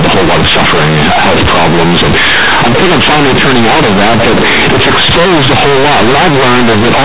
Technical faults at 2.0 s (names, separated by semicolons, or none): companded audio read as linear